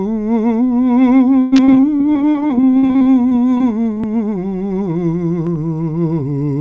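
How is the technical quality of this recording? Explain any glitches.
The music suffers from repeated packet loss, and its top end stops at 8 kHz, which fits a wideband call codec such as G.722. From 1.42 to 4.02 s, short holes open one after another. Each is patched by stretching the last sound. The longest lasts 99 ms. About 22% of the stretch is patched sound. The music turns choppy and robotic, with pieces missing.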